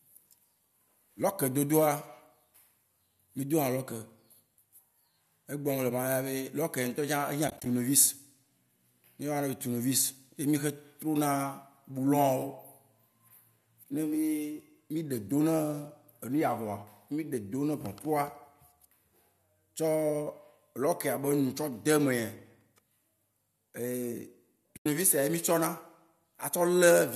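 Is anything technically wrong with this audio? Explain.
Yes, there are two short dropouts, both AAC frame loss with muting. Around 7.48 to 7.66 s, about 80 ms of sound goes missing in short holes of roughly 20 ms scattered across 180 ms. At 24.77 to 24.86 s about 90 ms goes missing. The decoder zeroes the missing frames and the overlapping windows fade around them, so you hear soft-edged holes.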